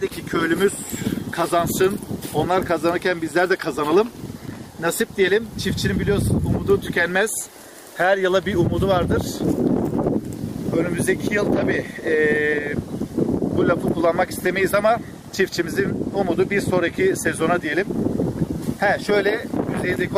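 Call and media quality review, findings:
No faults found on listening review. Nothing audible warrants a ticket entry.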